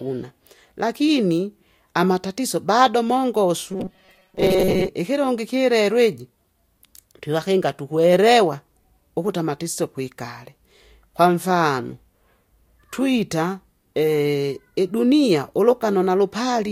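From 3.72 to 4.89 s the speech becomes a rigid 188 Hz buzz. This robotic sound likely comes from repeated short buffers of about 5.3 ms.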